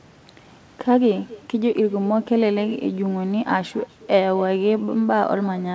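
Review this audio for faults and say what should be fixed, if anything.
Echo with no canceller runs throughout: the far end's loudspeaker feeds its microphone, so the speech returns roughly a third of a second later, about 21 dB down. It is a distinct delayed copy rather than smooth room reverb. Enabling acoustic echo cancellation on the far-end device would remove it.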